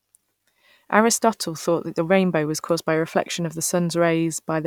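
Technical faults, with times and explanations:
No technical faults are audible.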